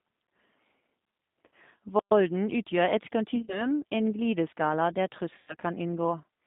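Speech runs through a G.729 codec for the whole clip, and the damage is plainly audible. Nothing sits below about 150 Hz or above 3.7 kHz, and the voice has the rough, slightly synthetic grain of a low-rate predictive coder, which fits 8 kbit/s G.729A. A simple band-limited line would sound muffled but clean. Here the roughness comes from each frame being rebuilt out of a few pulses through a vocal-tract filter, not from filtering alone. VoIP packet loss concealed by the speech codec appears three times: at 1.46 s, from 3.36 to 3.65 s, and from 5.38 to 5.54 s. The gaps are bridged rather than left silent. The decoder stretches its last pitch and filter into a fading buzzy tone or coloured noise over roughly 60, 80 and 100 ms of lost audio. In the first two events the losses are scattered in short runs of up to 40 ms, and the voice stays weak and smeared for a moment after real data returns. 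That lingering recovery marks concealment, as opposed to a dropout or a hard cut. From 1.99 to 2.11 s there is a playback stall. The output goes fully silent for about 120 ms and then resumes, likely because the player ran short of data or its thread was blocked. Unlike the concealed losses, this gap has no synthetic filler and no decaying buzz, just a clean stop and restart.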